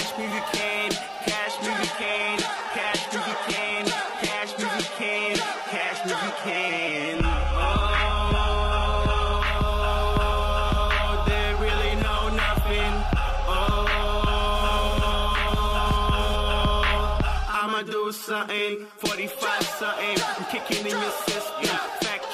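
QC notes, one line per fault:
1.39 to 9.39 s, adaptive stream at a lower bitrate: the connection slowed, and the player switched to a much leaner encoding, pointing to a drop from roughly 96 kbit/s AAC to a 16 kbit/s HE-AAC variant. Nothing remains above 11.8 kHz, and artefacts thicken abruptly with no gap.
14.55 to 16.36 s, GSM phone buzz: a nearby 2G phone pulsing its transmitter 217 times a second during a data transfer was rectified by the audio circuitry. The result is a hard, raspy 217 Hz buzz rich in harmonics, about 14 dB below the signal, coming and going.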